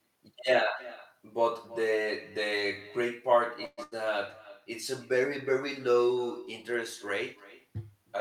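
Echo with no canceller runs through the whole clip. The far end's loudspeaker feeds its microphone, so every phrase returns roughly a third of a second later as a thin copy about 19 dB down.

A call audio freeze at 3.65 to 3.79 s sounds like the last sound stretched into a fading buzz or hiss for 121 ms. The likely cause is delayed packets draining the jitter buffer. The speech then resumes where it stopped, with nothing lost.

A burst of packet loss follows at 3.83 to 3.93 s. An 80 ms stretch is bridged by the last sound held and decaying, and the speech jumps ahead past the missing part.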